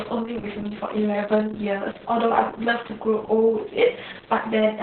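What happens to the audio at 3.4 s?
Heavy Opus voice compression, and it isn't specific to 3.4 s; it runs through the whole speech clip. Everything above about 4.3 kHz is gone, so it's squeezed into narrowband, and the excitation is coded very coarsely by the linear-prediction side of the codec. You hear a muffled, hoarse, slightly robotic voice. The damage level suggests a bitrate down around 6 kbps.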